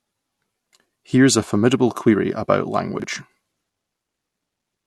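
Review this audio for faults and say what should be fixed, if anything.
There's a spot of chunks out of order at 3.00 to 3.04 s in the speech. A 20 ms chunk got delivered one slot late, so it plays after the chunk that should have followed it. Nothing's missing, but that 40 ms stretch comes out jumbled and there are three hard joins where the wrong pieces butt together. To prevent it, sequence-number the chunks and reorder them in a jitter buffer before writing.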